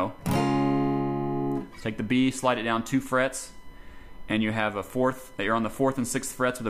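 From the start of the clip to its end there is USB whine, a fixed-pitch tone at 1 kHz sitting about 30 dB below the sound. The USB bus draws current in 1 ms frames, and that periodic load leaks into the audio through the power or ground.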